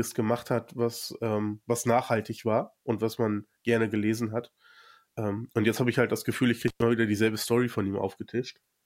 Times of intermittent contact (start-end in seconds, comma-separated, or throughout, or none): 6.68-6.82